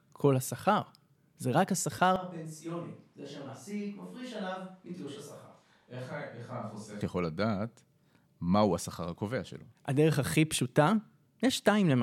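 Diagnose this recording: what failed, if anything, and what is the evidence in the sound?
From 2.16 s to 7.01 s the speech abruptly turns roomy and hollow, thinner in the low end and roughly 10 dB quieter, with room noise rising to around 30 dB below the speech. At 7.01 s it snaps back to the close, full sound. This is a switch to a distant microphone at the capture stage, with the close microphone's signal likely dropping out and a farther pickup carrying the audio until the close microphone returns.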